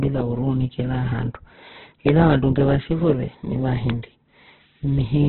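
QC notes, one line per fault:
Throughout: Opus compression. The encoder was most likely Opus in its music (CELT) mode, starved of bits and keeping only a narrowband signal, which fits a rate around 8 kbps. With so few bits, band energies are kept but their detail is filled by folding or noise, so the speech turns rough, grainy and hissy rather than swirly. Nothing survives above 4 kHz, leaving the audio dull and boxy.
2.09–2.11 s and 3.90–3.92 s: loud pop. A sudden voltage step or pulse was added to the signal, likely from a switch, connector, static discharge or driver glitch. The following circuitry shapes it into a brief spike about 15 dB above the speech level. Each event is heard as a single sharp pop on top of the speech, which carries on underneath without a break.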